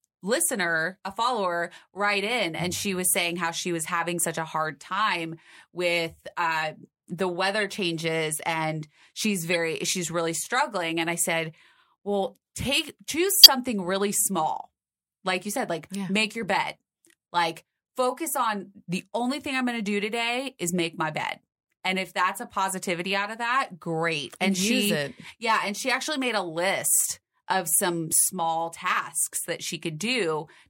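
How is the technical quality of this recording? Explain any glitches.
The recording has three audible glitches, all from a corrupt frame decoded. One comes at 7.61 s, after "time with uh the". Another runs from 9.51 to 9.56 s, before "she's really struggling". The third runs from 13.29 to 13.48 s, after "I said well take". Flipped bits made the decoder put energy at wrong frequencies. Each is a brief chirp or noise burst. They grow louder, from about -20 dBFS to near full scale. The lengths suggest one, two and about seven damaged frames.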